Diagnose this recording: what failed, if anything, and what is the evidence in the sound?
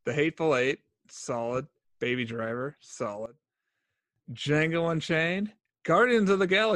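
Sudden gain jump, likely an unramped digital gain step: speech and background noise fall together by about 17 dB from 3.26 to 4.16 s, unlike compression.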